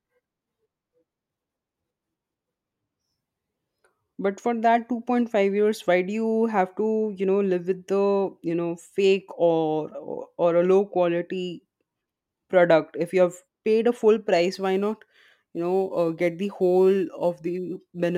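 From 14.54 s to the end at 18.17 s, a gritty, inharmonic fizz rides on the speech, strongest on loud and bright sounds, sitting roughly 35 dB below the speech. This is crude rate conversion. Samples were simply dropped or repeated to the nearest position rather than filtered, which fits a 48 kHz to 44.1 kHz change. The skipped and doubled samples fall in a repeating pattern, producing shifted, inharmonic copies of the speech.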